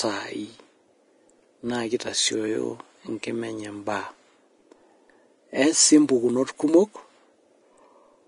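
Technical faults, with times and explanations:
Throughout: Vorbis compression. The speech has a grainy, hissy sheen in the upper range, with nothing at all above 10.6 kHz and plainly audible damage. This is likely a low-quality Vorbis encode, consistent with roughly 32 kbps. Treble detail is quantised so coarsely that it is replaced by noise of similar energy, and consonant onsets lose definition. A plain low-pass filter would only dull the top, without adding this grain.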